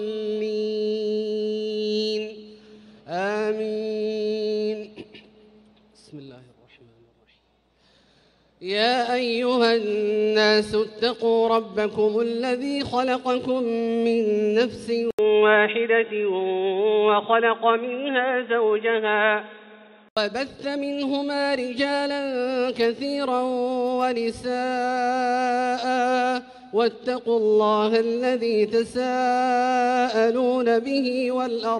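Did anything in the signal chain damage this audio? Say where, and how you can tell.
Yes. Input switched to a poorer device, likely at the driver or device stage: an 80 ms silence at 15.11 s, then nothing above 3.8 kHz until 20.17 s; the spectrogram's upper band empties.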